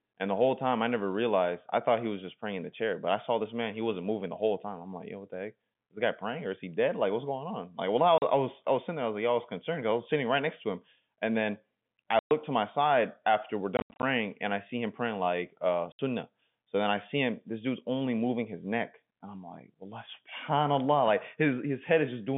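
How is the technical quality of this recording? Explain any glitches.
Four abrupt silent gaps with hard edges break up the speech. This is packet loss filled with silence. The narrow band of about 150 Hz to 3.5 kHz comes from the G.711 telephone coding on the line.

The first gap falls at 8.18 s and lasts 40 ms, between "well I" and "I was I was". The second, at 12.19 s, lasts 120 ms. From 13.77 to 14.03 s, after "my side after we're" and before "and I see him", 180 ms of sound is lost in scattered holes, the longest 80 ms. The last gap, at 15.92 s after "him praying like uh", lasts 70 ms.

The receiver played silence wherever packets were lost, so the sound cuts off hard and restarts abruptly. Every gap length is a multiple of 10 ms, which fits 10 ms packets.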